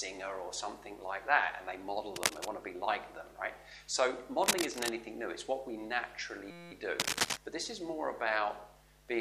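Cable scratch noise at 2.16 to 2.48 s, 4.44 to 4.89 s and 6.99 to 7.37 s adds bursts of rough scratching, roughly as loud as the sound itself and a little louder in the last burst. The likely cause is a worn cable or connector being moved, so its contact resistance jumps around. A system hang loop from 6.51 to 6.72 s repeats one 5.8 ms slice of audio about three dozen times, which comes out as a steady 172 Hz buzz. This happens when the sound hardware keeps replaying the same buffer while the driver stalls, and the loop length fits a 256-sample buffer.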